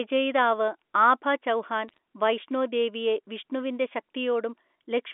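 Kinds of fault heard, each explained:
Bit errors on a digital phone line: Single bits in the digital stream are flipped, so each error corrupts one sample on the logarithmic telephone scale. When a high-order bit or the sign bit of a loud sample is hit, that sample jumps far from its true value and gives a sharp tick. Here a short burst of ticks crackles over the speech between 1.88 and 1.98 s, which fits an error rate well under one percent. The underlying telephone-band speech is left unchanged beneath the clicks.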